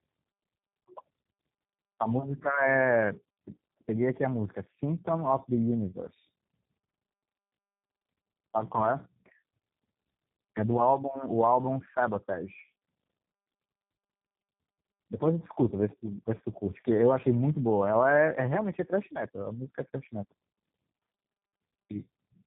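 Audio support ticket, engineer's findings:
Tandem speech coding, throughout the clip. Rough, muffled, warbly speech, nothing above 3.8 kHz. Fits two low-rate speech codecs in series, G.723.1-like then G.729A-like, each re-coding the previous codec's degraded output, so artefacts compound.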